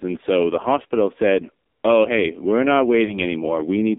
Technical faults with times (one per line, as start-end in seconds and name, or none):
0.00-3.98 AMR narrowband mobile codec
3.04-3.19 lost AMR speech frames